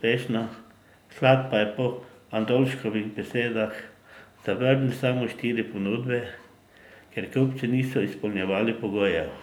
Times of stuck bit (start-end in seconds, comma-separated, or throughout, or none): none